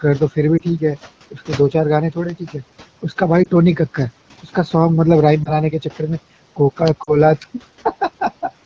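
At 0.57 to 0.61 s the speech briefly dips and warbles. These are lost AMR speech frames. Corrupted radio frames fail their check, and the decoder repeats the last good settings at falling gain. That fits one missing frame. The same dip returns at 3.43 to 3.49 s and at 5.43 to 5.58 s. At 2.30 s a sharp snap sits on top of the speech. It is likely an electrical switching spike picked up by the line. Another snap comes at 6.88 s. At 7.04 to 7.17 s the sound drops toward near silence for longer. That points to two consecutive lost frames.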